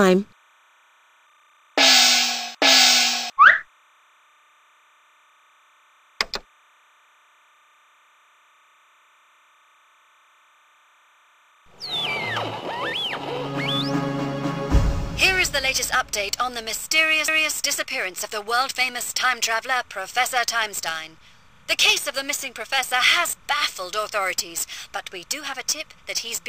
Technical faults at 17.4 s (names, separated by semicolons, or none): timecode bleed; overlapping chunks